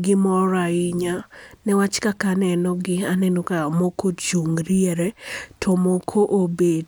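No technical faults are audible anywhere in this recording.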